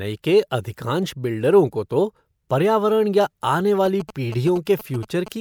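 From 3.85 to 5.28 s, a galloping dit-dit-dit of short buzzes at about 217 Hz sits well below the speech. These are GSM signalling bursts: a nearby 2G phone sending brief radio bursts, which the audio circuitry rectifies into audible buzzes.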